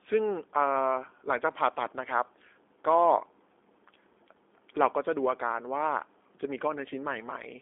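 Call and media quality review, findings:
G.729 codec damage across the whole speech clip: thin 300 Hz to 3.6 kHz band, rough synthetic buzz from pulse-coded excitation, fits an 8 kbit/s G.729A leg.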